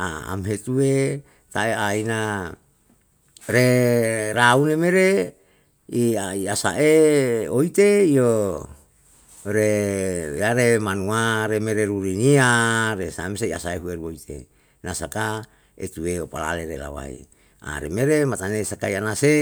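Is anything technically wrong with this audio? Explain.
No, nothing technically wrong turns up here, so the recording can just be taken as it sounds.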